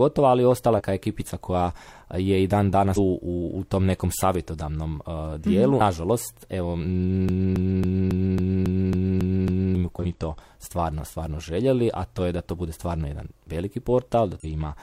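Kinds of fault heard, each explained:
Damaged data in a compressed stream: corrupted bytes knock the decoder out of sync, giving quick glitches at 0.75, 2.93, 9.99 and 14.4 s, the first just before "ekipica koja je i".
Broken-record loop: a 274 ms chunk repeats nine times from 7.29 to 9.75 s, likely a stalled stream resending its last fragment, so that stretch's real audio is lost.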